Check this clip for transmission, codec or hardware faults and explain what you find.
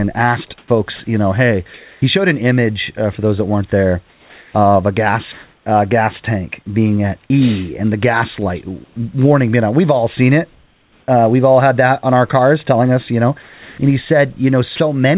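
Yes, there are voice-detector faults throughout. They sit on top of a narrowband call path, where nothing reaches above 4 kHz. That fits G.711 mu-law at 64 kbps. Room noise sits about 41 dB below the speech.

Sound chopped by the voice detector, 0.58 to 2.02 s. Across this stretch, about 440 ms of sound is swapped for synthetic fill. The likely cause is the sender's detector toggling between sending and not sending several times. Quiet syllables and word edges drop out. The speech sounds choppy.

Comfort noise in place of the background, three times. The first runs from 4.1 to 5.66 s, between "those that weren't there" and "uh gas tank being". The second runs from 8.84 to 8.96 s, between "and the gas light" and "being on". The third runs from 10.52 to 11.08 s, after "all seen it". The likely cause is the sender pausing transmission when it judges there is no speech. The receiver fills each gap with steady, featureless noise. 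The real room texture vanishes. In the last two gaps the fill is about 4 dB quieter than the true background.

Onset clipped by the voice detector, at 5.64 s and 11.06 s. Each time, the detector is slow to notice speech returning, likely because it reacts late to the first quiet energy. About 20 ms of the beginning never arrives, and comfort noise covers it. The speech snaps in abruptly, without its soft start.

Sound dropped by the voice detector, 13.42 to 13.78 s and 14.76 to 14.80 s. The likely cause is the detector mistaking quiet speech for background and stopping transmission. The first gap loses about 320 ms of sound and the second about 40 ms. The speech gives way to steady noise, then resumes once the detector triggers again.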